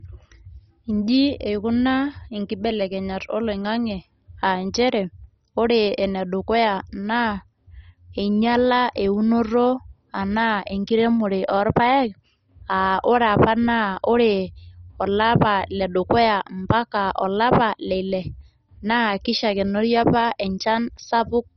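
Throughout, the speech is dull with nothing above 6.1 kHz and has a gurgling, granular texture, likely MP2 compression at a very low bitrate, around 32 kbps, switching off upper sub-bands.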